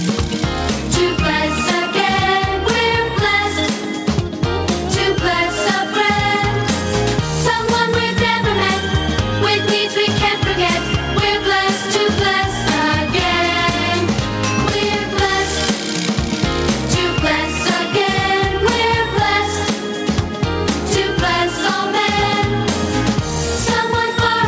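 Gain pumping runs through the whole clip. The gain swings by around 10 dB, pulled down under each loud sound. Loud and soft parts sit squashed together. The likely cause is a fast limiter fighting excessive input gain. Nothing is heard above 8 kHz.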